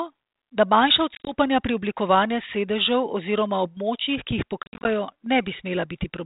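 Packet loss on an ADPCM call hits at 1.15 to 1.34 s, after "da manjša" and before "pri oblikovanju", and again at 4.63 to 4.87 s, after "oziroma območjih ki jih". Brief silent gaps, up to 30 ms and then 60 ms long, are scattered across each span. Each time the sound resumes, the decoder's prediction and step size no longer match the sender's, so it comes back slightly distorted until it recovers. The light narrowband G.726 ADPCM texture fits a 32 kbit/s link.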